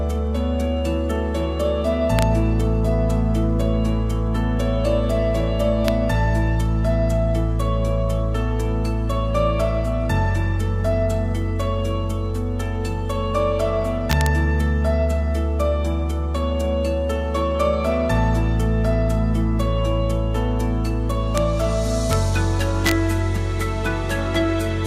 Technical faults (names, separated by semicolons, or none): integer overflow